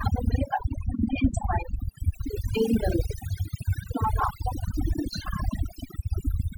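From start to finish the speech has overdone noise removal. The denoiser is cranked so hard that any frequency band sitting near its noise estimate gets pushed down or shut off, taking quiet bits of the voice with it. The background drops and breaks up into twinkly specks.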